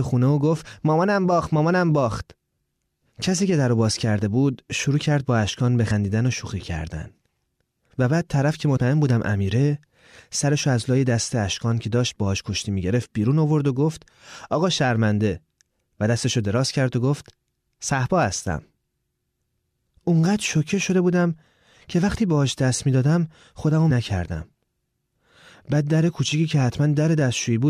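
Compressed frames were skipped. The decoder dropped whole frames, which fits a 23.2 ms frame length, so the speech jumps ahead: about a tenth of a second at 5.90 s, less at 8.76–8.78 s, and about 0.4 s at 23.90 s.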